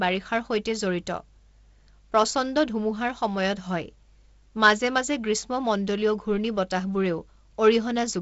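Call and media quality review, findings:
No faults found; speech carries G.722 wideband coding with content up to about 7.7 kHz and light coding noise, consistent with the 48 kbit/s mode.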